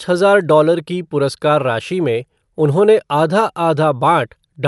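The speech sounds dull and muffled for its whole length, with nothing above 11.4 kHz and a rough, fluttering noise clinging to the voiced tones. That combination points to Dolby Digital compression as the likely cause. When an AC-3 style encoder is starved of bits, it narrows the band and leaves many frequency lines without mantissa data. The decoder fills those lines with dither noise, which here fits a low bitrate of about 64 kbps.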